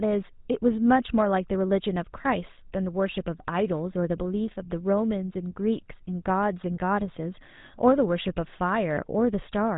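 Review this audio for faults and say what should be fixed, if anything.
The whole clip carries GSM full-rate codec damage from start to finish, and it is plainly audible. The speech has a buzzy, gravelly edge. The codec rebuilds each sound from a vocal-tract model excited by evenly spaced pulses, keeping only a third of the excitation detail. That coarse excitation causes the grit. Nothing passes above 3.8 kHz, so the top end is dull and sibilants lose their bite. The character fits a 13 kbps codec. Capture or route the audio over a wideband path so it never passes through a GSM full-rate stage.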